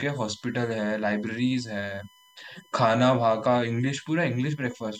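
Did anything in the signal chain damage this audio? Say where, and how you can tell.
Yes. A steady, fixed-pitch whine runs under the speech for the whole clip, built on 1 kHz and loudest at its 3 kHz multiple, around 35 dB below the speech. That is USB whine: the bus's 1 ms frame current leaking into the analogue wiring through shared power or ground.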